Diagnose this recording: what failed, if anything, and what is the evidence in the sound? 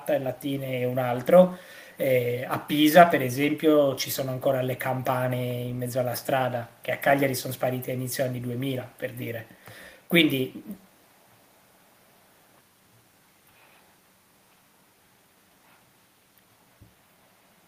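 Nothing in this speech recording points to a failure at any stage of the chain. No stage from capture through to playback leaves an audible mark on the sound.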